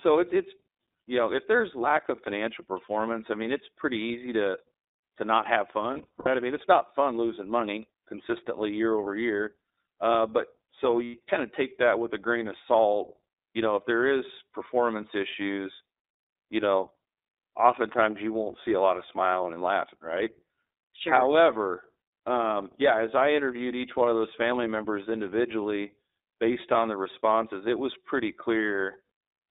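The whole thing runs through the iLBC codec, so it sounds like a phone line, squeezed to roughly 300 Hz to 3.7 kHz. The speech has that slightly rough, synthetic edge, which fits the 15.2 kbps mode with 20 ms frames. Each frame is coded independently, and the damage is plainly audible.

From 5.94 to 6.28 s, between "to to not have" and "i mean it's not", there are lost iLBC frames. About 200 ms of audio goes missing in short gaps spread over 320 ms, none much longer than a tenth of a second. The decoder fills each hole by repeating the last pitch cycle with some noise, so you hear brief buzzy, held-vowel smears. Then at 11.04 to 11.16 s, after "but so" and before "kind of take that", a single 100 ms loss gives one short sustained buzz. The voice picks up right after it.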